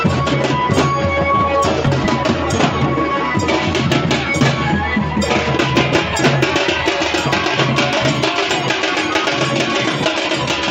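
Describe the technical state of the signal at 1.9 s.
At 1.9 s you're near the start of a loud pop, running from about 1.86 to 2.07 s. It's actually two sharp pops in quick succession, peaking a few dB above the surrounding sound, which carries on underneath. The likely culprit is a sudden voltage step or spike, say from a plug, switch, static discharge or driver hiccup, landing on the signal, with the downstream circuitry shaping each spike into that thumpy, clicky burst.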